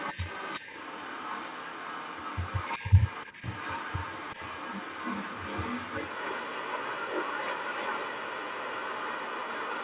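From the start of the speech to the end, a second, fainter copy of the talker trails the original by about 0.38 s, roughly 10 dB down. That is an echo leak, most likely a loudspeaker on the far side feeding its microphone while the echo canceller let part of it through. On a waveform each burst carries a smaller shadow burst after it. The spectrogram shows the same harmonic stripes repeated a little later and dimmer, all sitting below the 4 kHz ceiling of the narrowband call path.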